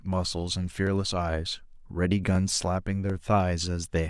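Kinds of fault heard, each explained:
Clock drift buffer slips: a click recurs every 0.742 s through the speech, from 0.13 s to 3.84 s, about seven times in all. The likely cause is two devices on separate clocks, roughly a thousand parts per million apart, so a buffer between them slowly drifts until a short block of around fifteen samples is dropped or repeated. On a waveform each slip is a small discontinuity; a spectrogram shows evenly spaced thin vertical broadband lines.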